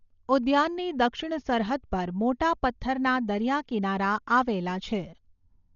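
Throughout the speech, the sound is dull and band-limited, with nothing above 6.9 kHz and a rough, fluttering noise around voiced tones. This is likely Dolby Digital compression at a very low rate, around 40 kbps, where starved frequency lines are refilled with dither noise.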